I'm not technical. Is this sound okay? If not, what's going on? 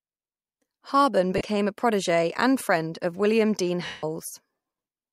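No. There are two dropouts from lost LE Audio frames, where the wireless link dropped bits of speech and the receiver filled the gap with a noisy smear. The first is brief, 1.38 to 1.41 s, just before "a protegee and friend". The second, 3.86 to 4.04 s, lasts 170 ms and fades toward silence.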